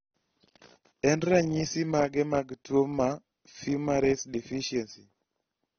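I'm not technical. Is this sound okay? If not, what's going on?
No. The whole clip sounds dull and clearly swirly, with nothing above 6.3 kHz, likely AAC compression squeezing the speech too hard.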